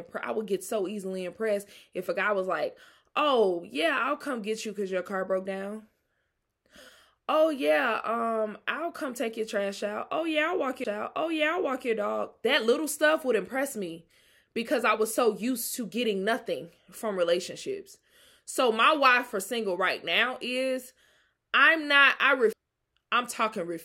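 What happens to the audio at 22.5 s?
Right after "I'm not I", at 22.53 s, there's a CD skip: the laser jumps to another track turn, so you hear a tiny tick, a near-instant mute, and the speech lurching out of place.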